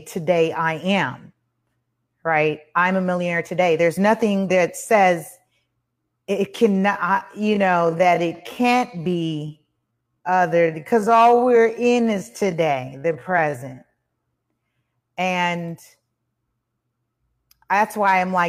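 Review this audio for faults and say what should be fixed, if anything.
From 6.77 to 14.09 s the speech abruptly slows to about 0.64 times its normal pace while its pitch stays unchanged, so that stretch drags. This time-stretched section was likely made by software lengthening the audio by repeating short slices. To prevent it, fit the timing by editing or re-recording rather than stretching the audio.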